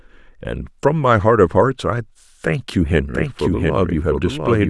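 Speech with a doubled audio track from 3.15 s to the end: a second full-band copy starts abruptly, trailing roughly 0.7 s behind at about 5 dB quieter. On a spectrogram or waveform, the speech patterns repeat, shifted and slightly fainter, with no decay or smearing. The likely cause is a second capture path or an edit holding two copies out of step.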